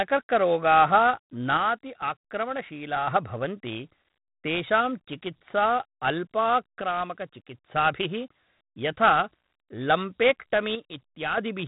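Throughout, the speech carries a gritty hiss that swells with its loudness, roughness on sharp onsets, and nothing above 3.9 kHz. This is heavy 4-bit ADPCM compression: each sample is coded as a coarse step from a prediction, which fits a 32 kbps stream.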